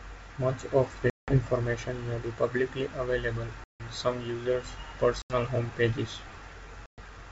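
Packet loss on an ADPCM call cuts hard-edged silent holes at 1.10–1.38 s, 3.64–3.81 s (after "may be publicly available"), 5.22–5.34 s (between "some users'" and "home pages") and 6.86–6.99 s. The missing audio runs 180, 160, 80 and 120 ms. Each gap throws the decoder's adaptive predictor and step size out of step with the sender's, so the speech resumes with brief, slight distortion before settling.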